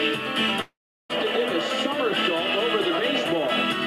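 From 0.61 s to 1.11 s the audio drops out for about half a second, most likely a long network dropout in which no packets reached the receiver. The last sound is stretched into a brief fading buzz or hiss, then roughly 370 ms of silence follows before the sound resumes with that stretch simply missing. On a spectrogram this shows as smeared, decaying bands giving way to an empty gap; the waveform tapers into a flat line.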